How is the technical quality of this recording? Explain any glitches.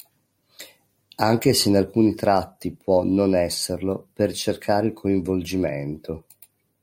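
No audible glitches or faults.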